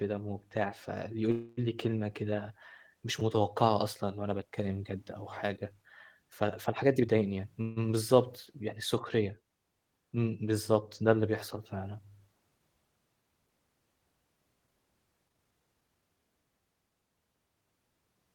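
At 1.31 s the speech stops moving forward and a fading buzz takes its place for about 0.26 s. This is a call audio freeze. Packets were likely held up in transit, so the jitter buffer ran dry. The receiver stretched the last sound to fill the wait. It never reaches silence. When the audio resumes at 1.59 s, it picks up where it left off. Nothing is lost, but the delay grows by about 0.26 s.

From 6.96 s to 7.47 s the speech rushes at 136% speed with no change in pitch. This is a jitter buffer speed-up. The buffer held more audio than it aims for. The receiver cut many short pitch-period slices, around a fifth of a second in total, to pull the delay back down.

At 7.61 s a second freeze fills about 0.15 s with a fading buzz, then the speech continues from the same point at 7.78 s.

From 15.28 s to 16.24 s a milder speed-up runs at 123%. Again about a fifth of a second is trimmed, and the speech sounds hurried.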